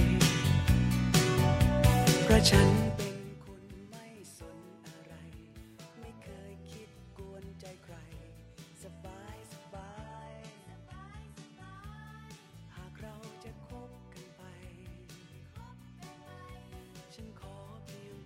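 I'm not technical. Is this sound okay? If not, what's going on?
No. From about 9.7 to 11.7 seconds the sound switches suddenly to a noticeably rougher, duller version, then switches back, with no gap either time. This is an adaptive stream at a lower bitrate: when the connection slowed, the player swapped to a smaller, more heavily compressed copy of the audio for those two seconds. Compression artefacts become more audible, and the highest treble above about 11.8 kHz is cut off entirely.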